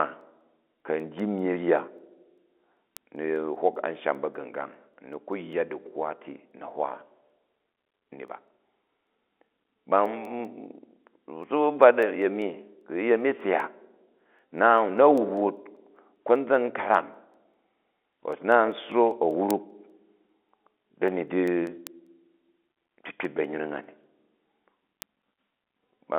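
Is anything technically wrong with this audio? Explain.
Yes. A receiving device's clock isn't locked to the sender's word clock, so word clock ticks run from 0.21 s to 26.0 s. The two clocks drift apart by roughly 100 parts per million. Each time they slip past each other, a single sample is dropped or repeated and its neighbours are misread. The result is about 150 sharp ticks of uneven strength, recurring roughly every fifth of a second across the speech, which sits within a telephone band with nothing above about 3.8 kHz.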